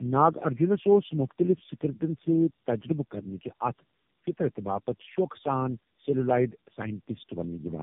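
Throughout, the speech carries tandem speech coding: it sounds like three narrowband AMR-NB coders in a row, each re-coding the last one's degraded output. It is rough, muffled and warbly. A spectrogram shows nothing above 3.7 kHz and smeared, blotchy harmonics.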